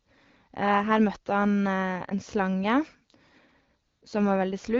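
A speech recording carried over an AMR wideband (HD Voice) link, where the light coding damage points to a rate of about 12.65 kbit/s. From 3.87 to 4.01 s, AMR comfort noise replaces the real signal for 140 ms. The sending phone judged the talker silent and stopped transmitting speech frames, so the receiver synthesised a smooth, steady noise from a rough level and spectrum estimate. The actual background drops out and this artificial hiss switches in and back out.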